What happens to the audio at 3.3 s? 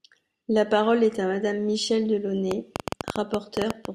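Something is likely injecting short electrical pulses into the signal chain, such as interference from nearby equipment or a faulty connection or power supply. At 3.3 s the speech is inside a train of clicks that runs from 2.51 s to the end at 3.95 s. There are about 15 similar clicks at roughly 9.8 per second, unevenly spaced and peaking around 15 dB above the speech, heard as sharp ticking over the voice and through its gaps.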